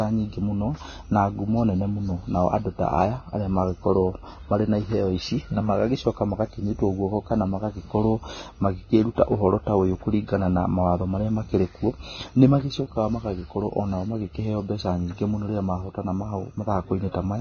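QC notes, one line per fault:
Throughout, Vorbis compression: nothing above 6.5 kHz, and the remaining treble is hissy and grainy, with roughened tones and blurred onsets, likely heavy Vorbis coding at a rate that fits about 18 kbps. A plain low-pass would sound dull but clean, not noisy.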